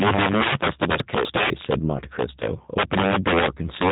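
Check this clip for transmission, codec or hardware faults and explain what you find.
Three faults turn up: integer overflow and G.729 coding run through the whole speech clip, and a stretch of chunks out of order sits between 1.0 and 1.5 s.

Integer overflow: the loud parts of the speech break into violent, snapping cracks, far harsher than ordinary clipping. The level was pushed about 14 dB too hot, and instead of being held at the ceiling, each peak that crossed the largest integer value wrapped round to the opposite extreme. A small but steady share of the samples is over the limit, so the cracks keep returning wherever the voice is strong, not just once or twice.

G.729 codec: the whole voice sounds narrow, slightly rough and synthetic, with nothing above about 3.8 kHz. That is the signature of G.729, a low-rate telephony codec that doesn't store the waveform. It rebuilds speech from a vocal tract filter, a pitch predictor and a few pulses per frame, and the result points to an 8 kbit/s stream. 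The coding damage is plainly audible.

Chunks out of order: between 1.0 and 1.5 s the speech briefly jumbles, jumping backward in a way that doesn't follow. The audio moves in 250 ms chunks, and one of them arrived or was written a chunk late, so two neighbouring chunks play in swapped order. Nothing is missing, but the sequence is wrong, and there are three hard splices between mismatched waveforms.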